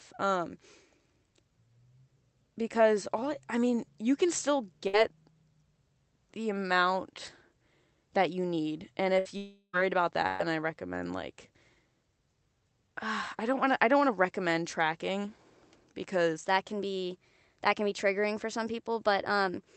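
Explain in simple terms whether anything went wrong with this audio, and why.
A few things went wrong here, all on the network or playback side.

First, there are three bursts of packet loss, at 4.87 to 4.96 s, 9.19 to 9.28 s and 10.27 to 10.42 s. In each one, a short run of the speech never arrived: about 60 ms for the first two and about 120 ms for the third. The receiver covered each gap by stretching out the last bit of sound and fading it down, so you hear a brief buzz or hiss before the speech picks up again with that slice missing.

Squeezed between those is a longer hole, a long network dropout from 9.37 to 9.76 s. It's likely the connection simply stopped delivering audio for a moment. The receiver kept filling for about 0.36 s with that fading continuation of the last sound. Then there's a very short patch of silence, about 40 ms, before the speech returns. Whatever was said in that gap is gone.

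Finally, from 16.4 s to the end, there's a section at the wrong speed. That stretch plays about 1.12 times too fast, so the voice comes out hurried and roughly two semitones higher. Speed and pitch shift together, the way they do when playback runs on the wrong clock, which is the likely cause here.

The call itself went through Opus, which trims everything above about 8 kHz and adds its usual coding texture.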